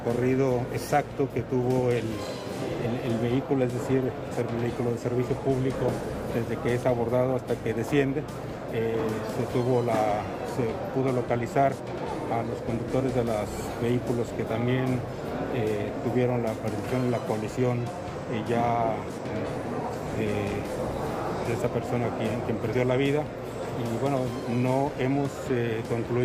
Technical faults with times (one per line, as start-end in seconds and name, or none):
none